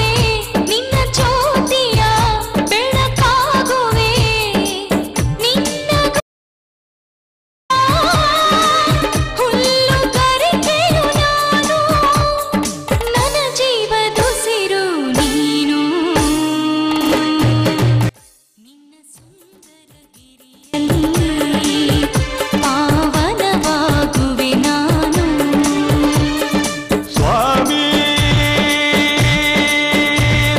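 At 6.20 s the audio cuts off abruptly and returns at 7.70 s, leaving about 1.5 s of complete silence with no room tone or noise floor underneath. This is an audio dropout to silence. The likely cause is a momentary loss of the input signal, such as a disconnected device, a failed link or an accidental mute, while the recorder kept writing silence. Whatever sound occurred in that interval is unrecoverable.

From 18.09 s to 20.74 s the level collapses by about 32 dB, and what remains is a faint residue rather than the full signal. This is one channel inverted, heard through a mono sum. With one stereo channel's polarity likely reversed for that stretch, material common to both channels cancels when they are added together, so centred content largely disappears. Only the difference between left and right survives. Full level returns at 20.74 s.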